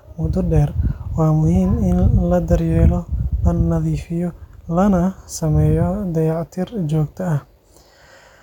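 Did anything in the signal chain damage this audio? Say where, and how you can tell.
No, nothing in the signal chain damaged this audio.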